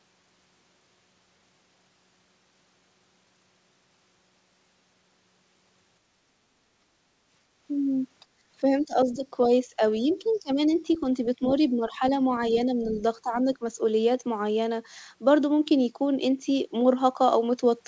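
At 8.25 to 8.47 s the room background drops by about 19 dB and then returns. This is background gated by the echo canceller: it clamped the microphone while the loudspeaker played, so the room tone vanishes but no voice is cut. From 8.63 to 11.03 s, 11.39 to 12.02 s and 12.55 to 13.65 s the talker's own voice dips, by roughly 15 dB and then about 10 dB. These dips are likely speech suppressed in double talk, with the canceller turning down the voice itself because both sides spoke at once. Inside that stretch, at 10.12 to 10.38 s and 10.92 to 10.98 s, faint scraps of the other side's voice leak through, well below the talker, with the second one fainter still. That is added sound rather than lost sound. All of this passes through a G.722 call path with nothing above 8 kHz.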